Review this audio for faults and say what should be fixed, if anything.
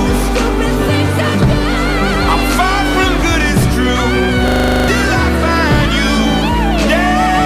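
From 4.48 to 4.88 s there is a system hang loop: a 40 ms slice repeats exactly ten times, a 25 Hz stutter, while the system stalled and the hardware replayed its ring buffer. Unlike a dropout, there is no gap, only identical repetition, and around 0.4 s of audio is lost. Prevent it by keeping the audio thread at real-time priority and free of blocking calls, with a watchdog that mutes output if buffer refills stop.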